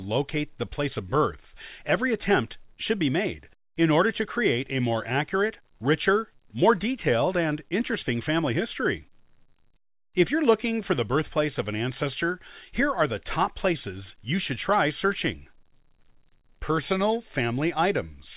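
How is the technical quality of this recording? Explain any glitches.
No glitches are audible in the speech, which arrives over a call path using G.711 A-law at 64 kbps and so carries nothing above 4 kHz.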